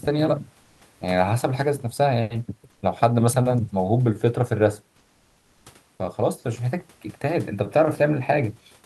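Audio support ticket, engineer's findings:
Comfort noise in place of the background at 0.63–0.81, 2.71–2.81, 4.97–5.65 s: room noise swapped for flat, featureless hiss, not silence as with a noise gate. Likely Opus DTX.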